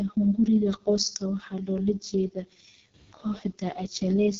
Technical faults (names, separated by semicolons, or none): AMR wideband (HD Voice) codec